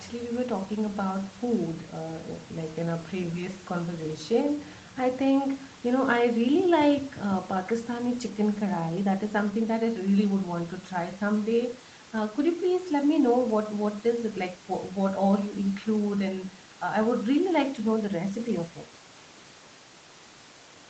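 No technical faults are audible.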